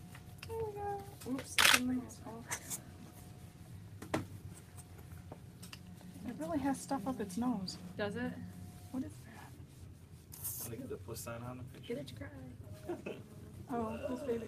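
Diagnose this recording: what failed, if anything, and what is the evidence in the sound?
Nothing in the signal chain failed: the audio stays continuous and stable throughout, with no dropouts, distortion, level jumps or timing disturbances.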